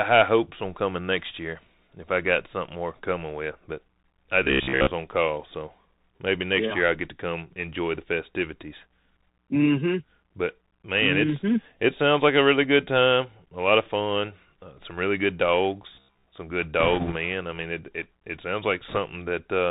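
This is a speech clip carried over a Bluetooth CVSD headset codec the whole way through, and the codec damage is plainly audible. Nothing gets above 4 kHz, so it sounds boxy and narrowband, the s sounds come out scratchy, and there's a grainy hiss sitting under the speech where the one-bit delta coder's adaptive step keeps hunting up and down. That character fits a 64 kbps CVSD link. Two stretches have the robotic sound from repeated short buffers: 4.43 to 4.91 s, and 15.95 to 16.27 s, right after "some really good" and just before "some good". Both carry a rigid metallic buzz at 66.8 Hz that roughly tracks the speech. The likely cause is that fresh audio was arriving too slowly, so the playback side kept looping its last chunk of about 15 ms, which fits a buffer of that length. Most of the audio in those spans is repeated material rather than new signal. Then there are bit errors on the Bluetooth voice link. 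From 16.80 to 17.17 s, between "some good" and "I mean it it", there's a rushing, crackly layer at an error rate of roughly 1.5 percent, and a shorter burst from 18.88 to 18.98 s just after "it it it sounds" runs at about 2 percent. Because every CVSD bit nudges the output by only a small step and the error fades out, these come through as a crackly wash rather than sharp clicks.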